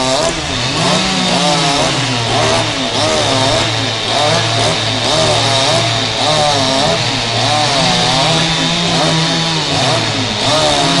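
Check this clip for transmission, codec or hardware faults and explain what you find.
I found no faults to explain in this clip.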